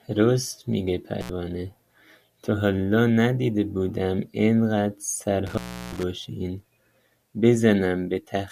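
Speech that cuts out with crackle at 1.21 to 1.30 s (about 76 ms open) and 5.47 to 6.03 s (about 350 ms open): intermittent contact from a loose cable or plug.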